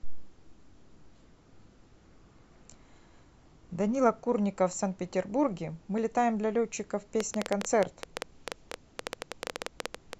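From 7.2 s to 10.14 s a train of clicks ticks and pops over the speech, about 30 in all at close to 10 per second, spaced unevenly, and each click stands out roughly 20 dB above the speech. The clicks share the same sharp shape and keep sounding through any pause. The repeated, uniform pulses are likely interference from nearby equipment or a faulty connection or power supply.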